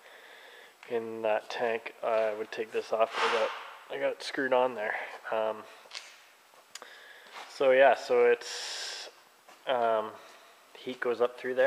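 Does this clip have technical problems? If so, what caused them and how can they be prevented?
No, no technical problems heard.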